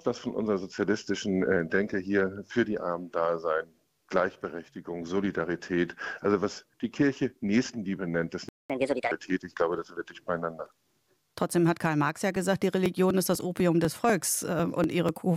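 The audio cuts to silence at 8.49 s and stays silent for about 0.21 s until 8.70 s. This playback stall was likely caused by the player running short of buffered data or having its thread blocked. Straight after the gap, from 8.70 to 9.12 s, the sound runs fast and high, at 1.5 times normal speed and roughly seven semitones up, before settling back. This is catch-up at higher speed: the player resamples its backlog to recover the time lost in the stall. From 12.36 to 15.09 s a regular ticking runs through the signal, about ten small clicks spaced 0.248 s apart. These are periodic USB or driver dropouts. Something blocking the bus or audio driver on a fixed schedule causes roughly 2 ms of audio to be skipped each time, leaving a tiny discontinuity at every interval.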